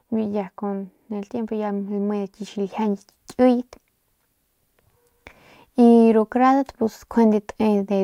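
At 2.72 s the level steps up by about 4 dB and holds there to the end of the clip, a sudden gain jump. The change is instant, with no ramp, most likely a digital gain setting applied between one sample and the next. What separates it from a speaker leaning closer or an AGC reacting is that the background noise rises by the same amount at the same moment, and the new level never drifts back.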